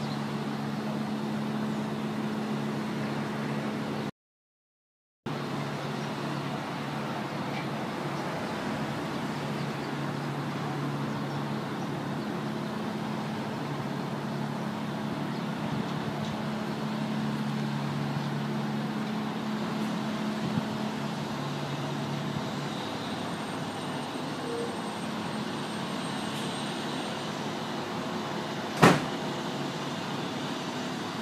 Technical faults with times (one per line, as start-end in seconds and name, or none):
4.10-5.26 audio dropout to silence